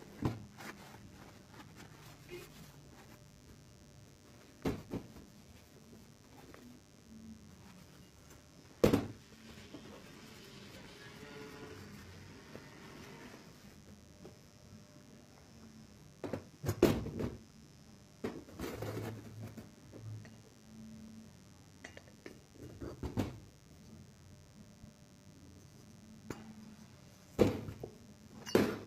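From start to finish a mains buzz sits under the sound, roughly 25 dB below it: switching spikes from 50 Hz power leak in, giving a steady, raspy edge. A spectrogram shows evenly spaced horizontal lines at 50 Hz multiples, reaching several kHz.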